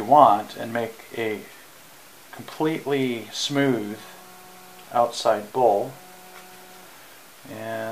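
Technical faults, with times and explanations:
Nothing here stands out as a technical fault; the audio holds up fine all the way along.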